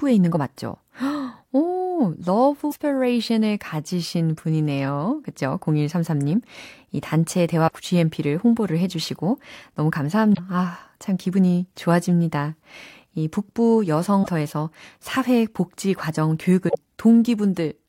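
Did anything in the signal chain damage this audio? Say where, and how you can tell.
Yes. Short glitches, each about 80 to 100 ms, break the speech at 2.68, 7.64, 10.31, 14.20 and 16.65 s. This is damaged data in a compressed stream at the codec stage: corrupt frames decode as garbage until the decoder resynchronises on a later header.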